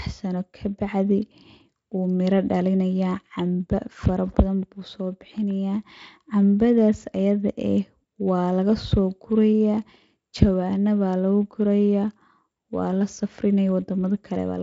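No technical fault can be heard in this speech clip. It has passed through a Speex codec path that seems to be working at a high setting, and the audio stops at about 7.6 kHz, as a wideband Speex path would.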